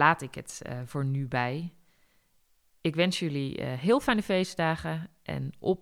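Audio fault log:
No faults are audible anywhere in this speech recording.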